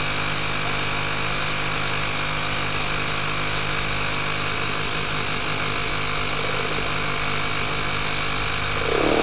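Nothing stood out on listening to these sounds, which carry the narrow bandwidth of a call line, with no content above about 4 kHz.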